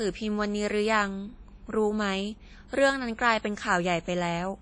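Throughout the speech, nothing reaches above 10.1 kHz, and the sound rings and washes with a hiss that breathes with each phrase. That smeared, pumping noise, rather than a clean dull cutoff, is likely WMA compression, fitting a rate near 32 kbps.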